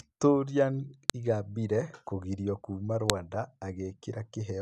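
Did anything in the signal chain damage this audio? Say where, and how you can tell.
Yes. Sharp snaps at 1.10 s and 3.10 s, the second just after "kũgirio kuuma", ignore the speech and fall 2.0 s apart. That is a file header played as audio: 2-second WAV pieces were joined during storage or playback with headers intact, so header bytes play as samples.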